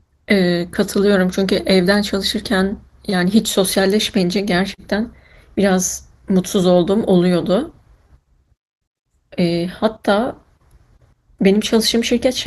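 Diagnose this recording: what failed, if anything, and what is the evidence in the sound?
Nothing failed; the speech passes through without fault.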